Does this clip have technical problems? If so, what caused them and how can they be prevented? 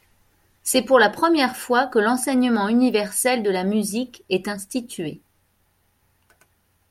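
No, there are no technical problems to hear in this recording. Since nothing went wrong, there is no cause to trace and nothing needs to be prevented.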